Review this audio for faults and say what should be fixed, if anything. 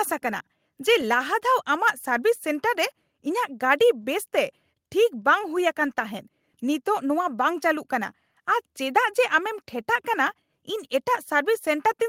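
No faults found; nothing needs fixing.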